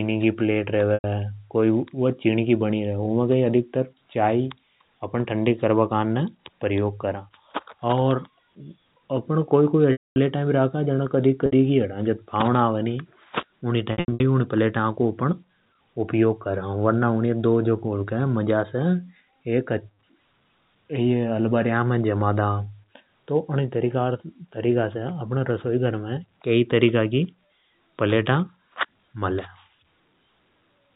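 After "की पलेट" at 0.94 s, a 100 ms buzzy held tone stands in for the speech. Similar gaps follow at 9.92 s (240 ms, fading toward silence), 11.46 s (60 ms) and 13.92 s (short dropouts across 280 ms). This is packet loss with pitch repetition: the receiver looped the last pitch period to bridge the missing audio.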